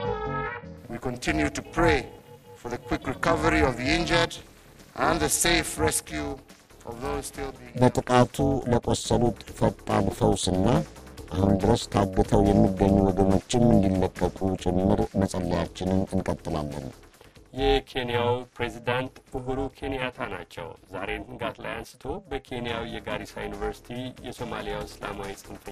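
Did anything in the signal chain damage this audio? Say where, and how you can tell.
Yes. Overlap-add ripple runs through the whole clip. A frame-based processing stage resynthesised the sound with overlapping windows that don't sum to constant gain, so the level dips about 60 dB once per frame, around 400 Hz, heard as a metallic buzz with extra tones around each note.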